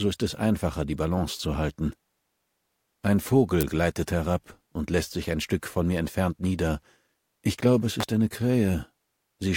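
Two sharp snaps sit on top of the sound, a loud one at 3.61 to 3.63 s peaking around -5 dBFS and a somewhat quieter one at 8.00 to 8.03 s. These are electrical switching spikes, likely arcs from a nearby switch or motor picked up by the audio line.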